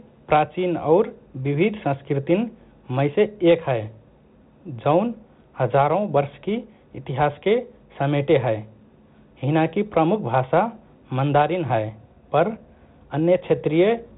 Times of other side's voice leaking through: none

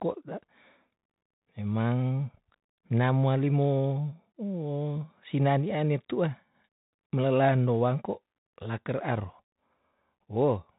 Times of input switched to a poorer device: none

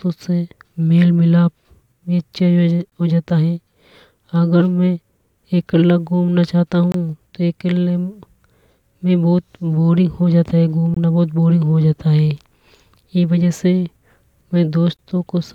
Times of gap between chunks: 2.90-2.92, 6.92-6.94, 10.94-10.97, 14.97-14.99

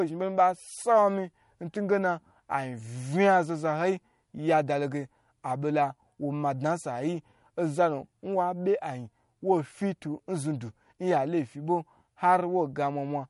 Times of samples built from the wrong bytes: none

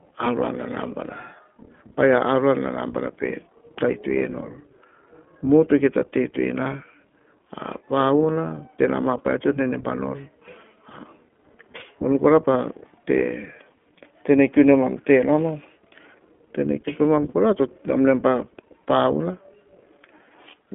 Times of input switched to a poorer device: none

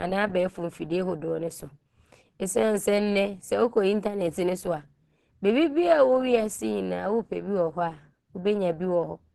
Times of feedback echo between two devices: none

